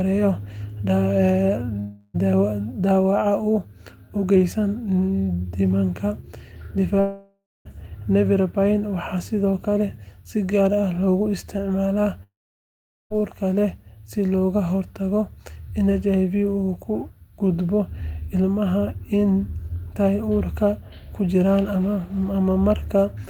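A likely long network dropout stops the audio arriving at 1.79–2.16 s, 7.00–7.67 s and 12.23–13.12 s (after "loogu isticmaalaa"). Each gap becomes a fading buzz, then silence in the later two, and speech resumes with the lost part gone.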